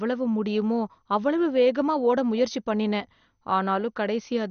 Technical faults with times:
0.00-4.50 MP2 compression

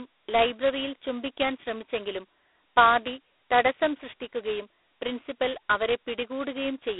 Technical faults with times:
0.00-7.00 G.726 ADPCM

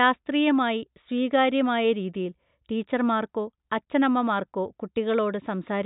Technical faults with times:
none

